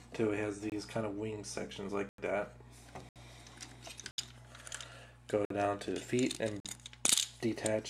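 Six blocks of digital silence cut into the sound, at 0.70 s (23 ms), 2.09 s (93 ms), 3.09 s (70 ms), 4.11 s (70 ms), 5.45 s (53 ms) and 6.60 s (46 ms). Output buffers likely went unfilled and were sent as zeros; the 23, 46 and 93 ms gaps span 1024, 2048 and 4096 samples. Each hole starts and ends abruptly, and the gaps are true silence rather than a fade or smeared concealment noise.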